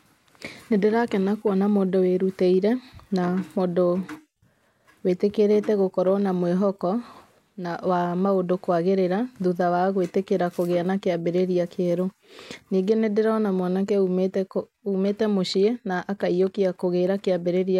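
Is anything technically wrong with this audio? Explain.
No, the speech signal shows no technical faults anywhere in the recording.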